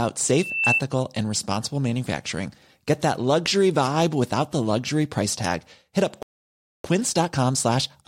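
From 0.30 to 0.82 s, a loudspeaker feedback squeal rises out of the speech. A microphone is hearing its own loudspeaker, and the loop gain passes one at 2.7 kHz. That tone swells over roughly 0.4 s to about 5 dB above the voice. It ends just before "and responsible manufacturing".

At 6.23 s the speech stops dead. Silence lasts 0.62 s, until 6.84 s. This playback stall most likely comes from the player running out of buffered data or its thread being blocked.

From 6.84 s to the end, time-compressed catch-up follows. The player trims its backlog by cutting short slices and cross-fading across the joins. The speech runs at 1.25 times normal speed. Pitch stays natural, but the delivery sounds hurried.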